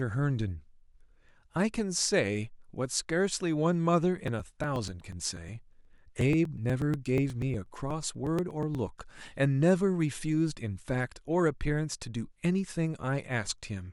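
From 4.28 s to 9.11 s, periodic USB or driver dropouts occur every 0.121 s. Something stalls the audio path at a fixed interval. A few milliseconds of speech are skipped each time, about forty times. The result is a steady train of ticks over the speech.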